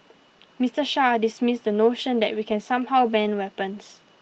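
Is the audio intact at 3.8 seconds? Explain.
Yes, the speech at 3.8 seconds is intact, with no dropout, glitch or other fault there.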